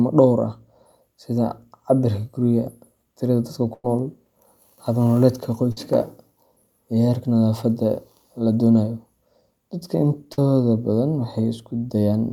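Three bursts of packet loss interrupt the speech, where consecutive packets never arrived in time and the receiver had to improvise. From 3.73 to 3.85 s it stretched the last sound for about 104 ms, fading it until the final 30 ms went silent, before resuming 100 ms further on. At 5.72 to 5.78 s and 10.33 to 10.39 s, shorter 50 ms gaps are briefly smeared over, each leaving a small jump where audio is missing.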